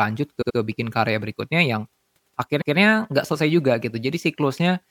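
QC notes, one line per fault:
0.41–0.56 s, repeated frames: a 78 ms stretch plays three times in a row, giving a quick stutter. A short run of compressed frames, which fits three frames, was duplicated, so the decoder replays it. About 157 ms is added.
2.60–2.76 s, repeated frames: a longer 157 ms block plays twice. It is heard as one skip-back, which fits six duplicated frames. It adds another 157 ms.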